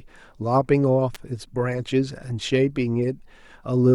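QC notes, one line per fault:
1.15 s, electrical switching spike: a sharp snap lands on top of the speech, peaking somewhere around -15 dBFS and gone in about 15 milliseconds. It's likely a nearby switch or static discharge arcing, with the audio line catching that burst as a click.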